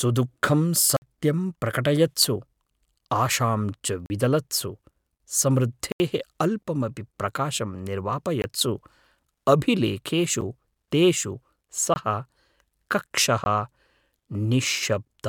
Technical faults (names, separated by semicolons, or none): block of digital silence